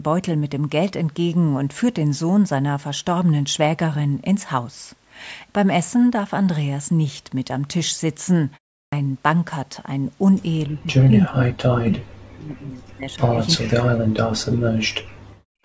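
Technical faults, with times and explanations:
8.86 to 8.93 s, clipped start after a pause: after a silence of 0.36 s, the sound resumes abruptly, with its first 65 ms missing. The onset lacks its natural rise and seems to jump in already under way. The playback path went idle during the short gap and needed a moment to wake and settle, so the opening fragment was lost before output resumed.
10.69 to 11.54 s and 11.73 to 15.43 s, speech suppressed in double talk: the voice repeatedly sinks, thins and breaks into pieces, dropping by around 40 dB at its deepest. This affects most of the first span and roughly three seconds of the second. The likely cause is both sides talking at once. The echo canceller could not tell this talker from the returning loudspeaker sound and attenuated everything together.
11.35 to 11.45 s, echo leak: a brief, delayed copy of the voice appears 347 ms after the original, only a few dB quieter. 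This is likely echo from a far-end loudspeaker that the other side's echo canceller failed to fully remove. The residue travelled back down the line and lands inside the disturbed double-talk stretch.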